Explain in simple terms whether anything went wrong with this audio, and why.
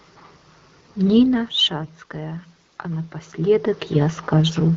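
Two things went wrong. From 1.27 to 4.27 s there's automatic gain rising: the talker's level dropped, so the phone slowly turned itself up, lifting voice and background together. From 1.84 to 1.90 s, AMR bit errors briefly make the voice hoarse and gargly, because a weak link scrambled some of the data describing the sound.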